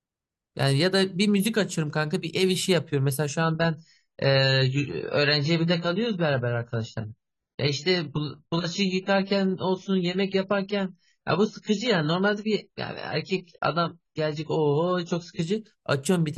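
At 3.42 s the speech switches abruptly to a duller, swirlier sound with nothing above 7 kHz, restoring at 15.42 s: an adaptive stream at a lower bitrate, which fits a drop from about 96 to 16 kbit/s AAC. Unlike a dropout, there's no gap.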